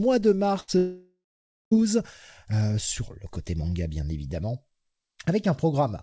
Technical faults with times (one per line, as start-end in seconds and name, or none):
0.60-0.70 burst of packet loss
0.78-1.73 long network dropout